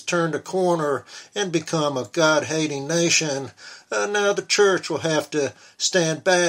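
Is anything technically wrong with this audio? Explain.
No technical faults are audible.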